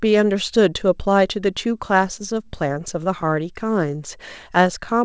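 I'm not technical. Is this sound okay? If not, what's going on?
No. Between 1.88 and 3.30 seconds there are scattered short gaps. During the call, about seven small pieces of the speech signal got lost or arrived too late, the longest only around 15 milliseconds. Each time, the receiving end covered the hole by stretching out the sound that came just before it. You mostly still hear the speech clearly, but a few tiny ticks, smears or little hiccups creep in over that stretch.

From 3.90 seconds to nearly 4.98 seconds there is a jitter buffer slow-down. The receiver keeps a small reserve of incoming audio to smooth out uneven delivery. Here that reserve was running low or had just been set larger, so it built it up by repeating tiny slices of the sound many times over. The speech plays at about 94 percent of normal speed without dropping in pitch, so sounds come out slightly drawn out and may waver a little.

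The call connection's compression also leaves nothing above 8 kHz, so the very top end of the sound is missing throughout.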